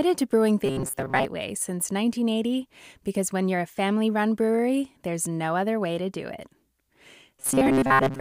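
From 0.66 to 1.25 s and again from 7.38 s to the end, the speech turns into a robotic sound from repeated short buffers: a rigid metallic buzz near 134 Hz. This likely comes from a segment of about 7.5 ms being looped for most of each stretch while the real audio is dropped.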